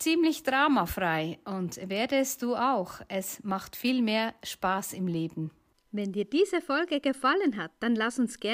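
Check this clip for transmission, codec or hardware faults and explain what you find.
No transmission, codec or hardware faults found.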